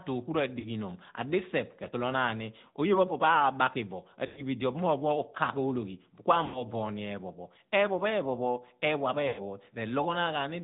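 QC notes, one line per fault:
Throughout: AMR narrowband mobile codec. Nothing above 4 kHz survives, so the speech is thin and band-limited. The plainly audible buzzy, synthetic texture comes from the vocal-tract model and sparse pulse excitation, which fits the 10.2 kbps mode.
0.60–0.68 s, 4.26–4.43 s (just before "bo idi"), 6.46–6.63 s, 9.28–9.41 s (just after "eeghua pho"): lost AMR speech frames. Losses of 40, 100, 80 and 100 ms. The decoder repeats the last good pitch and filter settings at falling gain, so the sound smears, then fades.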